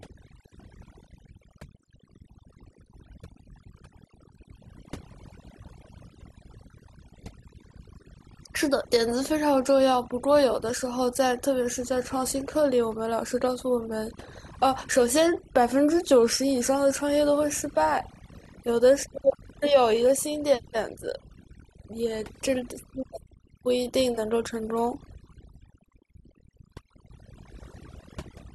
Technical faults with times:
0.00-28.55 overdone noise removal

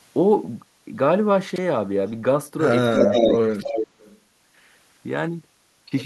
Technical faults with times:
1.50-1.58 chunks out of order
2.94-3.36 echo leak
3.02-3.86 speech suppressed in double talk
3.61-4.19 echo leak

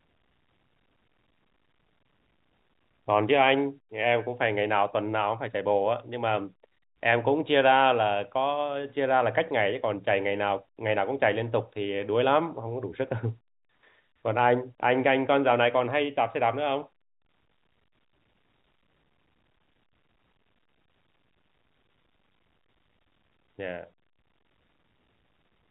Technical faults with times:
none

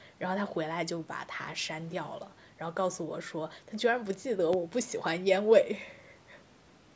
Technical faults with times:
4.53-4.57 loud pop

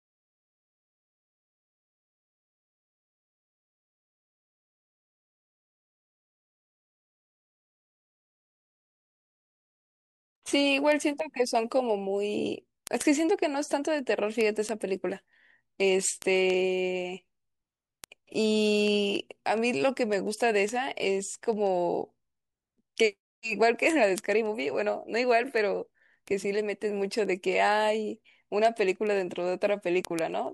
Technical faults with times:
0.17-30.47 word clock ticks

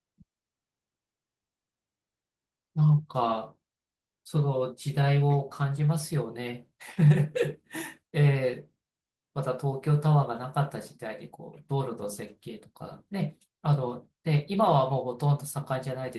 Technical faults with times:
none

